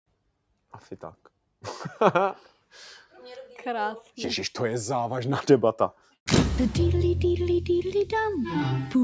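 Sound cut by the noise suppressor between 5.97 and 6.27 s: the suppressor mistook part of the sound for noise and pulled it down by about 8 dB for roughly 150 ms. The call microphone processing limits the band to below 8 kHz.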